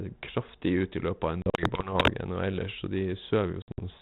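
Packet loss on an ADPCM call cuts hard-edged silent holes between 1.42 and 1.88 s (longest 40 ms) and between 3.62 and 3.79 s (longest 60 ms). Speech re-enters slightly distorted while the decoder's predictor and step size resynchronise over tens of milliseconds.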